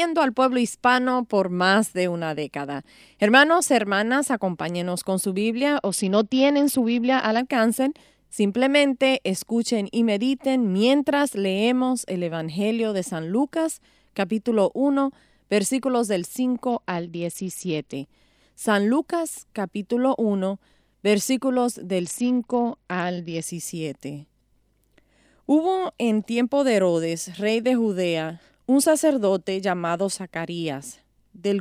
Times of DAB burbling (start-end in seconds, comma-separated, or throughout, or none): none